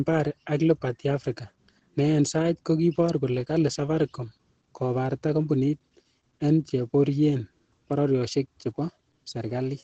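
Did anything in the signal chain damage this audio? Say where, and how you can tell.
Yes, at the codec stage: Opus voice compression throughout the speech, plainly audible. Nothing survives above about 8.8 kHz, and the voice sounds muffled, hoarse and slightly robotic. That fits SILK in wideband mode at around 12 kbps, coding the excitation coarsely to save bits.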